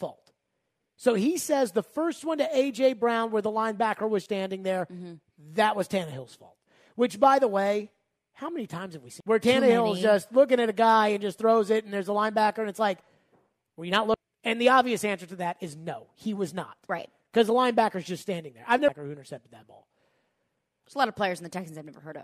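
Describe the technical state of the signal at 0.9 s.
At 0.9 s the signal is intact, with no audible technical fault at that point.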